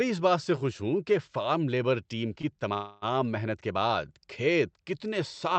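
At 2.41 to 2.60 s the speech briefly hangs on one sound with a faint buzz or dip. This is a short stall from a late packet: the jitter buffer ran dry, and about 18 ms of the last sound was stretched before playback resumed where it left off, losing nothing.

From 2.74 to 3.05 s the speech freezes into a fading buzz or hiss for about 0.28 s, without dropping to silence, then carries on. This is likely a call audio freeze, where delayed packets emptied the buffer and the receiver extended the last sound until they arrived.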